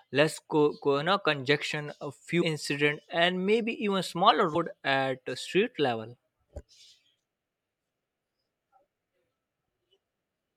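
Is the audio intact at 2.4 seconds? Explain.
No. Damaged data in a compressed stream hits at 2.41 s, just after "no congestion a". A short stretch of the encoded bitstream there is corrupt, so the decoder cannot parse those frames correctly, loses sync and skips forward until it finds the next valid frame header. The result is a brief glitch, such as a chirp, click or short hole, lasting under 20 ms.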